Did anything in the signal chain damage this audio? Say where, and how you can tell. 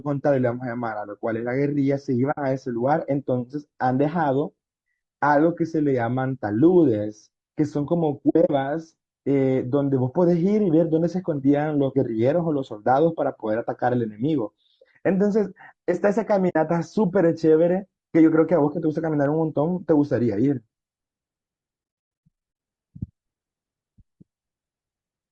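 Yes. At the codec stage, the speech is rough and grainy throughout, with noise between the harmonics and a thin, synthetic-sounding top band. This points to low-delay AAC compression, likely AAC-ELD at around 32 kbps. On a spectrogram the harmonics look smeared and blotchy.

At the network or decoder stage, AAC frame loss with muting leaves soft-edged gaps at 2.31–2.38 s, 8.29–8.50 s, 16.49–16.56 s and from 22.27 s, where about 440 ms goes missing over 0.76 s. The decoder zeroes lost frames, so the spectrogram shows blank columns that fade out and in.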